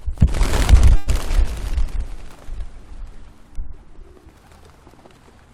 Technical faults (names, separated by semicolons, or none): call audio freeze